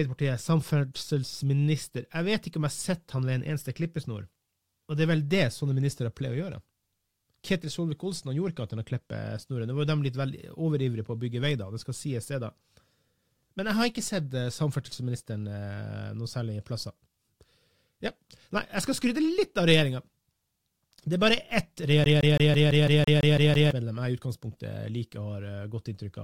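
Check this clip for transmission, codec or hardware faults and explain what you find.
Two faults are audible in this speech clip.

From 8.16 to 9.16 s the top of the sound turns faintly dull and airless. This is channel delay (comb filtering): one channel lags by a tiny amount, which fits a delay of about one sample, and summing to mono cancels the highest frequencies, with the first notch up near 20 kHz.

From 22.04 to 23.71 s the audio stutters rapidly, with the same 0.17 s snippet repeating ten times, each separated by a brief mute. This is a CD stuck on one turn: a scratch keeps throwing the laser back one track at the same point on every rotation.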